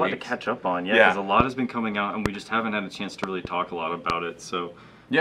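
Loud pops interrupt the sound four times, at 1.40–1.43 s, 2.26–2.28 s, 4.10–4.12 s, and as a pair of pops between 3.24 and 3.47 s, while the audio continues underneath. The single pops peak roughly 20 dB above the surrounding level and the pair about 15 dB. The likely cause is a sudden voltage step from a plug, switch, static discharge or driver glitch. On a waveform each pop is a tall, narrow spike. On a spectrogram each shows as a thin vertical stripe across the full frequency range.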